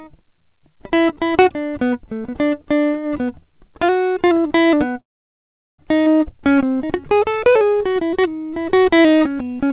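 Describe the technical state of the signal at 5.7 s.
At 5.7 s you're in the middle of a call audio freeze, running from 5.0 to 5.81 s. The music trails off and goes silent for most of that stretch, likely because delayed packets emptied the jitter buffer. It then picks up where it stopped, so nothing is lost and it ends up about 0.78 s late.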